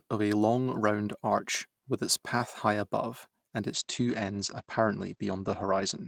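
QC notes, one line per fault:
3.79 to 6.07 s, call bitrate drop: from 3.79 s until the end of the clip the speech turns rougher and duller. The encoder's rate dropped from 32 kbps to about 13 kbps after the call's bandwidth estimate fell, so it's coding everything more coarsely, and at that rate it also throws away the top end, with audio bandwidth shrinking from 20 kHz to 8 kHz. It stays at the low rate for roughly 2.2 s and hasn't recovered by the time the clip ends.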